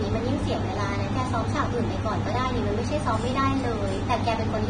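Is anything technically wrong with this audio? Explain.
Yes, the speech has a hard ceiling near 9.7 kHz throughout, with hissy, grainy treble and smeared consonants, likely heavy Vorbis compression at a bitrate near 23 kbps.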